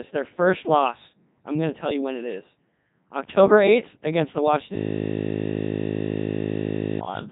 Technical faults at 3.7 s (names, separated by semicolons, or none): Codec 2 vocoder